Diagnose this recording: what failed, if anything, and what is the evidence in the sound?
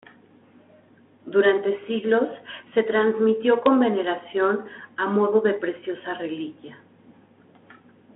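Nothing has failed: the speech arrives over a G.726 ADPCM path at 32 kbit/s, confined to a telephone band of 250 Hz to 3.5 kHz with nothing above 3.9 kHz, and carries only the light coding texture expected at that rate.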